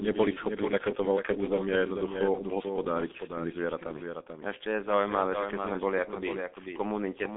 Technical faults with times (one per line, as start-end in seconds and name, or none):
0.00-7.37 doubled audio track
0.00-7.37 G.723.1 codec